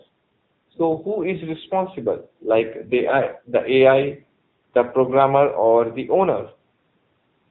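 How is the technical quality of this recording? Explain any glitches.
The recording's technical quality is limited by an AMR narrowband mobile codec artefact that runs for the whole clip. The speech passes through a vocal-tract model with nothing above 4 kHz. Its plainly buzzy, synthetic texture points to a low bitrate around 8 kbps, where too few pulses per subframe remain to carry natural detail.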